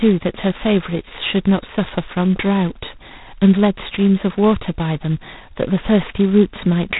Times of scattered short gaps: none

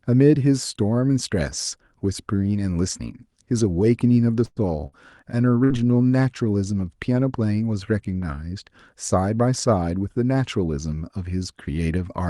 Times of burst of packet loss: 4.45-4.59, 4.86-4.95, 5.64-5.73

